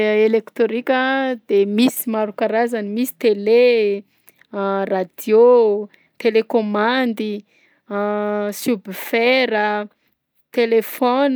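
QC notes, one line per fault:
No faults found in this speech recording. Nothing in it needs to be flagged.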